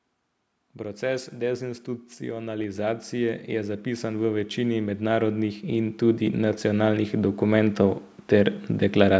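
Automatic gain rising runs from 0.77 s to 9.15 s: the call's gain control judged the speech too quiet and kept lifting its level, about 17 dB overall, so voice and room noise swell together steadily, heard through microphone processing that passes nothing above 8 kHz.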